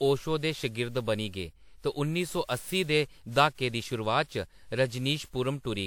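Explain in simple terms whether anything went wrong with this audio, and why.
Generation loss runs through the whole speech clip. It sounds swirly, smeared and hollow, with blurred starts to sounds. This is likely from being compressed and re-saved around ten times, each pass adding fresh damage on top of the last.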